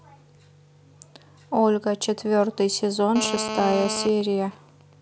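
A hard, raspy buzz with a dense stack of harmonics cuts in from 3.16 s to 4.05 s, only about 6 dB below the speech and unrelated to it. This is GSM phone buzz: a 2G handset in a call sends radio bursts 217 times a second, and the audio circuitry rectifies them into a 217 Hz tone.

From 4.05 s to 4.93 s the steady buzz gives way to even ticks with a longer 217 Hz buzz twice a second, roughly 15 dB under the speech. These are GSM signalling bursts: the handset's user has fallen silent mid-call, so it transmits only short groups of bursts, which are still being rectified.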